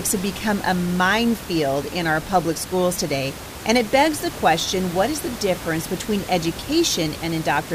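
Nothing goes wrong anywhere in this speech recording; the only thing under it is some background sound from the room itself, sitting about 13 dB below the talking, which is just part of where the microphone was.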